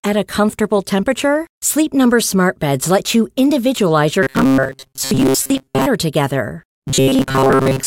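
Right after "let you individualize your", at 4.23 s, the speech goes robotic until 5.86 s, and it happens again from 6.88 s to 7.86 s. Both stretches have that rigid, metallic buzz at a fixed 134 Hz, still loosely tracking the words. It's robotic sound from repeated short buffers, most likely: audio arriving too seldom, with roughly 7.5 ms chunks looped to fill gaps, so most of the real signal gets skipped.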